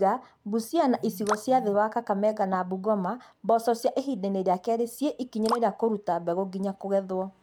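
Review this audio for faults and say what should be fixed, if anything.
No faults were heard, so nothing needs fixing.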